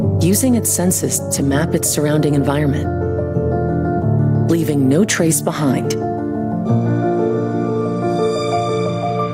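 No technical faults are audible anywhere in the clip.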